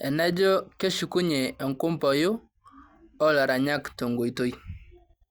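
No technical faults can be heard anywhere in this speech recording.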